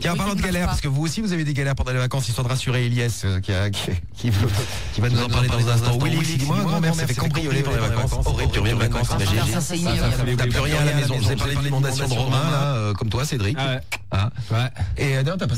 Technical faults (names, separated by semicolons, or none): doubled audio track